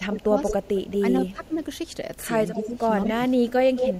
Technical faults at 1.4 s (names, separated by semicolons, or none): speech suppressed in double talk; echo leak